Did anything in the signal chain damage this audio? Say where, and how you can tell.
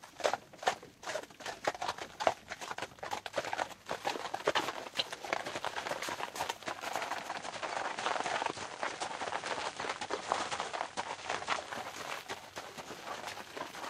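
Yes. Between 7.06 and 11.93 s the receiver shows digital radio blending to analogue: a 0.43 s cross-fade to FM brings hiss about 25 dB below the signal at unchanged level. Rising hiss distinguishes it from codec band-limiting.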